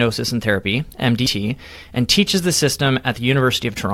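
At 1.26 s the speech is interrupted by a very brief burst of damaged data in the compressed stream, lasting only a few milliseconds. Corrupted bytes reached the decoder at that point, so it misread the affected frame, lost its alignment with the bitstream and had to search forward for the next valid frame header before resuming normal decoding. The result is a short glitch in the speech, heard as a chirp, squawk, click or short hole.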